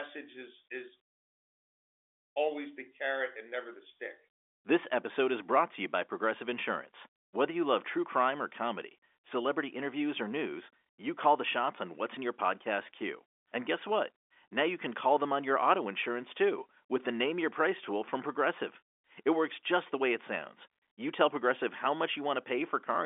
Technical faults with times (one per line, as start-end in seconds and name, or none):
none